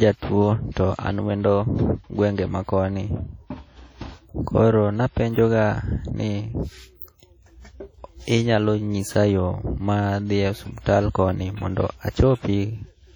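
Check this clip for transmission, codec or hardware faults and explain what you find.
Two codec problems stand out in the speech here, one running the whole way through and one brief event near the end.

Throughout, the speech has a ringing, washy quality with a hiss that swells and fades along with the talking. That points to heavy WMA compression, likely at a low bitrate around 32 kbps, where long transform blocks smear the quantisation noise and zero out quieter detail.

At about 12.10 to 12.15 s there's pre-echo: a short hiss leads into a sharp onset, which itself sounds softened. The codec spread its noise across the whole block, so roughly 51 ms of grit lands in the quiet just before the attack.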